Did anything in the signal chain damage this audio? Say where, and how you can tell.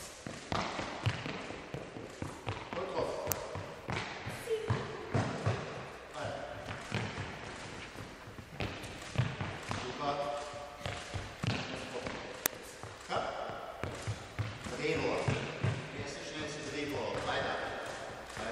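Yes, at the driver or buffer stage: an uninitialised buffer was played twice, giving very short, loud cracks at 3.32 s (about 0.67 ms, which fits a 32-sample block) and 12.46 s (about 2.67 ms, which fits a 128-sample block). Each time, a block reached the output before any audio was written into it, so leftover memory played as samples. Unlike a dropout click or clipping, the burst has no link to the surrounding level.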